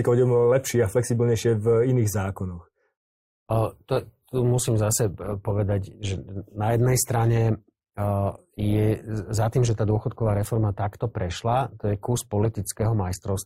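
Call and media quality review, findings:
Abrupt quality drop at 3.42 s, lasting to the end. No gap or dropout. Speech shows more codec smearing. Adaptive stream at a lower bitrate: player switched renditions mid-stream after throughput fell. Artefact character fits an Opus step from about 64 to 24 kbit/s. Component: ABR logic and network path.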